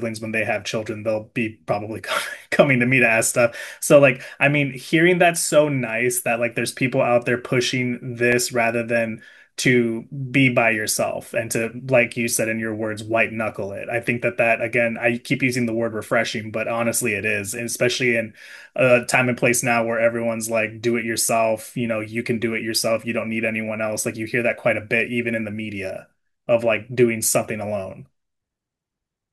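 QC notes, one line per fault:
8.32 s repeated buffer: a tiny block of about 2.9 ms, which fits a 128-sample buffer, plays twice, giving a click; the waveform shows a duplicated segment with a hard seam and a thin vertical spectrogram line.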